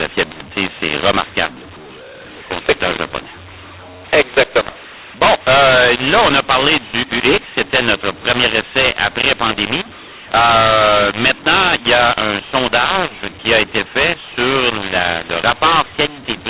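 From start to finish the speech has a mu-law and A-law mix-up: A-law telephone samples are decoded as mu-law, scrambling levels. It sounds harsh and distorted, with pauses filled by hiss. The waveform shows warped peaks and a raised floor, and the spectrogram shows broadband noise up to 4 kHz.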